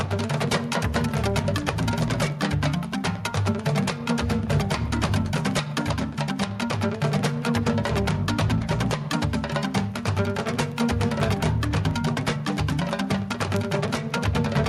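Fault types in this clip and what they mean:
Gain pumping: The gain swings about 5 dB, pulled down under loud sounds. The likely cause is excess gain driving a fast limiter.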